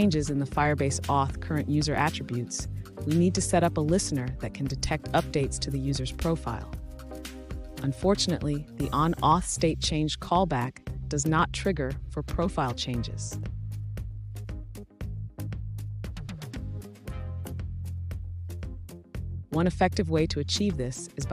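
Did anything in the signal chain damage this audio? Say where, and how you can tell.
Yes: a sharp tick at 2.28 s, a 4.4 ms block of digital silence, where the driver or buffer stage likely failed to deliver samples in time, cutting abruptly to silence.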